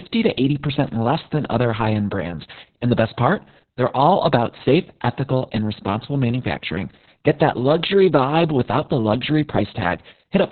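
A speech clip with Opus voice compression throughout. Nothing is heard above 4.3 kHz, so the voice is narrowband and muffled. The coarse SILK coding makes it hoarse and slightly robotic. The heavy damage points to a very low bitrate, around 6 kbps.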